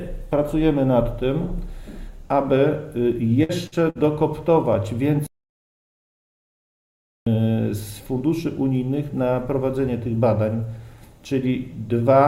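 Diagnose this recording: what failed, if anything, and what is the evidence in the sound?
Network burst of packet loss at 3.43–3.52, 3.67–3.75 and 3.90–4.03 s: concealment holds the sound about 50 ms before resuming 60 ms later, unlike silent stalls.

Playback stall from 5.27 to 7.27 s: output goes fully silent for 2 s with no fading concealment, likely the player's buffer running dry.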